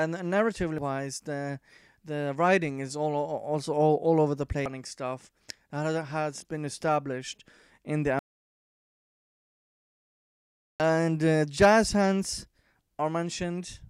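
Damaged data in a compressed stream struck twice, from 0.78 to 0.82 s and again at 4.66 s. Corrupt frames threw the decoder out of sync while it hunted for the next valid header, leaving a brief glitch each time. An audio dropout to silence follows from 8.19 to 10.80 s, most likely from a lost input while recording carried on writing silence. About 2.6 s of sound vanishes into dead-flat silence with no room tone.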